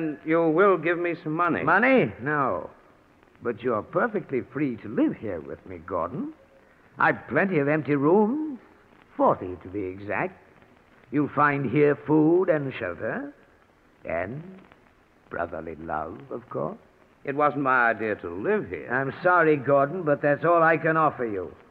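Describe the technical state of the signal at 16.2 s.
At 16.2 s the signal is intact, with no audible technical fault at that moment.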